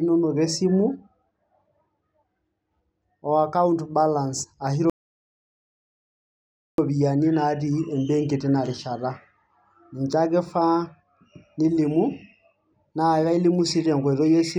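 Playback stall in speech from 4.90 to 6.78 s: after "o account balance ashu" the audio falls silent for 1.89 s, likely because the player ran short of data.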